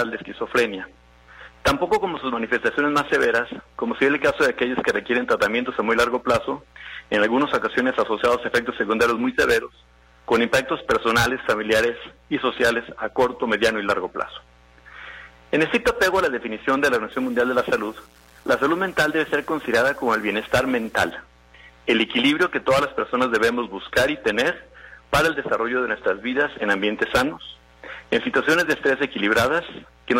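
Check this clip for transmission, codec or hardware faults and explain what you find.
One fault appears. From 17.12 to 21.11 s, the sound turns grainy: likely low bit depth without dither, about 8-bit rounding, leaving signal-following distortion roughly 35 dB down.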